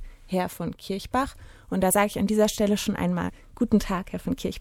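The audio has compressed frames skipped at 0.49 s, 1.9 s and 3.28 to 3.30 s: whole frames about 26.1 ms long go unplayed, jumping ahead roughly one frame, then roughly two at the last point.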